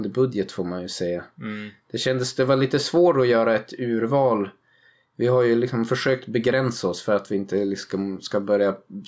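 Throughout the recording, the level swing is around 5 dB, and loud and quiet passages sit unnaturally close together, leaving the speech squashed. This is gain pumping, likely from the microphone gain being set far too high and a fast limiter or compressor repeatedly pulling it down on each loud sound. The call's microphone processing tops out at 8 kHz.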